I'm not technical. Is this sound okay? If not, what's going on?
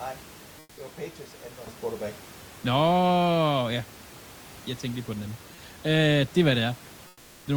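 No. For the first 1.67 s the sound is dull and noticeably quieter, with nothing above about 8.4 kHz. It then brightens after a very brief gap at 1.67 s. That points to an input switched to a poorer device, likely a lower-quality microphone or headset used at the start.

From 0.59 to 0.75 s and again from 7.07 to 7.43 s, the natural room noise behind the speech gives way to a flat, slightly quieter hiss. This is comfort noise in place of the background, likely from the sender pausing transmission in quiet moments while the receiver fills the gap with artificial noise.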